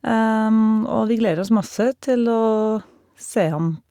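No technical faults can be heard anywhere in the speech.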